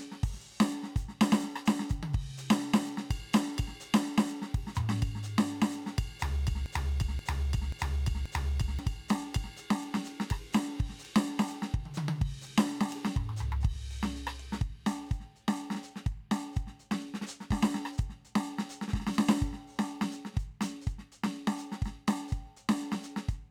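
At 6.66 s the music locks into a broken-record loop: a fragment of about 532 ms plays four times in a row, identical each pass, until 8.79 s. The repeats join back to back, so the same short figure cycles. This likely comes from the player or stream stalling and resending the last buffered segment. The music that should have filled those two seconds is missing when playback resumes.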